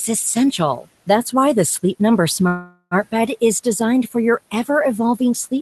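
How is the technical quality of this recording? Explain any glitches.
The recording has one clear glitch, a call audio freeze in the middle. The speech sits on a call codec path with its top cut near 12 kHz, and room noise sits about 25 dB below the speech.

From 2.47 s to 2.94 s the speech stalls. Packets were likely held up on the way, so the jitter buffer ran empty and the receiver stretched the last sound for about 0.44 s. You hear this as a fading buzz, then roughly 20 ms of silence. The speech then picks up exactly where it stopped, so nothing is lost, but everything after arrives about 0.44 s late. On a spectrogram the stretched section appears as flat, smeared horizontal bands that fade out, ending in a thin blank strip before normal speech resumes. On a waveform it appears as a decaying, repetitive envelope.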